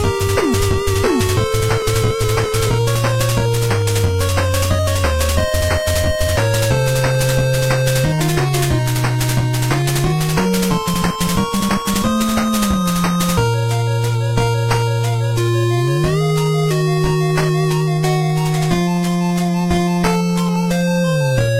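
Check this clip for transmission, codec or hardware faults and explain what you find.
Nothing turned up here; I listened all the way through and didn't hear anything that points to a problem with the transmission, the encoding or the hardware.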